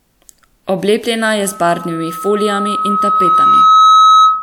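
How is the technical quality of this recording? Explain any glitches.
The recording is marred by feedback. Loudspeaker feedback squeal runs from 1.44 s to the end: the microphone re-amplifies its own speaker, so a 1.3 kHz tone swells over roughly two seconds to about 10 dB above the speech.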